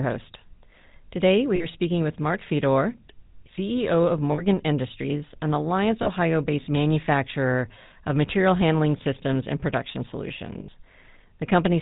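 The whole clip carries GSM full-rate codec damage, plainly audible as buzzy, gravelly roughness with nothing above 4 kHz. Lost GSM frames hit at 1.56 s before "speaking with", 4.32 s, 6.02 s before "based manufacturer of material", and 10.6 s after "handling systems and production". Each briefly repeats the last sound as a rough, metallic ring.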